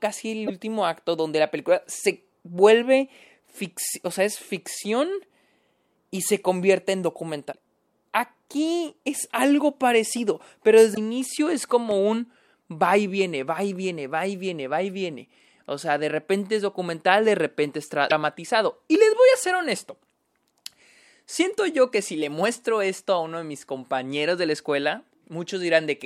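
Damaged data in the compressed stream makes the decoder misread frames and hunt for the next header, at 0.43–0.50 s, 7.49–7.54 s, 10.91–10.98 s and 18.07–18.12 s. Each loss of sync breaks the speech with a brief chirp, squawk, click or short hole.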